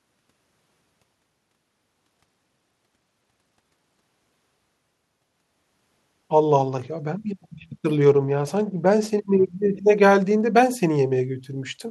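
From 2.06 to 4.04 s and again from 7.25 to 9.56 s, a Bluetooth SBC bit pool drop starves the encoder, consistent with a fall from bit pool 28 to 12, near 96 kbps. Upper sub-bands lose their bits, so the speech turns dull and gritty until recovery.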